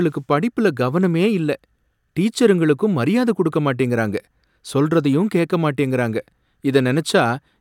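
Nothing stood out as a technical problem on listening to this speech recording.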